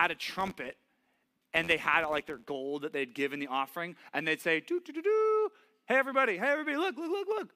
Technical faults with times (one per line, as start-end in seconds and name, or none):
0.00-2.52 filter restarted on every block